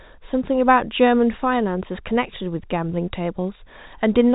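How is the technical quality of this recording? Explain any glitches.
The technical quality is sound, and there are no glitches to explain in this telephone-band speech recording.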